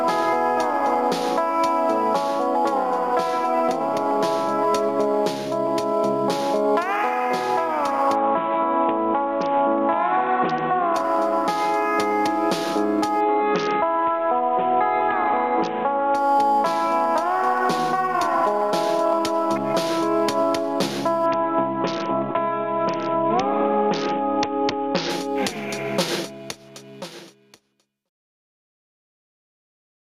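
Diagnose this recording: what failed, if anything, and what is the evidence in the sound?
Bluetooth SBC bit pool drops at 8.15–10.94 s, 13.21–16.15 s and 21.26–25.10 s, a codec-stage fault over the wireless link: treble dulls and gritty noise rises, consistent with the bit pool falling from about 28 to 6 (around 60 kbps) on a congested link, starving upper sub-bands and coarsely quantising the rest.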